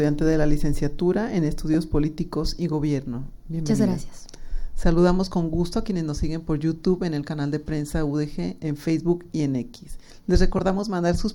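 Two brief lost LE Audio frames, at 1.74 s and 10.58 s: each drops 10 ms, and the LC3 decoder patches the gap by reusing the last spectrum with scrambled signs, giving a quick noisy smear.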